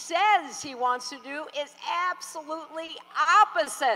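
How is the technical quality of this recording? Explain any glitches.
The recording has three brief timing glitches near the end. Short stalls from a late packet occur at 2.85–2.90 s, 3.22–3.27 s and 3.63–3.68 s. Each time the jitter buffer ran dry, the receiver held the last sound about 30 ms, then resumed unchanged, giving a slight drag with a faint buzz or dip.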